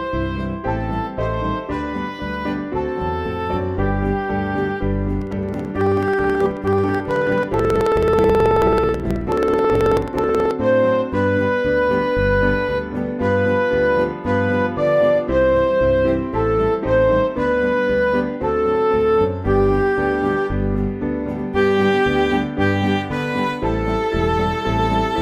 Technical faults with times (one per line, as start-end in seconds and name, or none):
5.22-10.51 periodic USB or driver dropouts